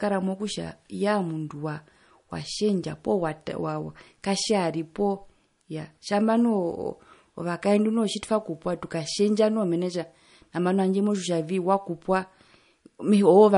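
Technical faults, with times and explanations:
Throughout, MP3 compression: the speech has a watery, swirling quality, and nothing is heard above about 10.6 kHz. The encoder likely ran short of bits, which fits a rate near 40 kbps. It cut the treble and switched weak frequency lines on and off between frames.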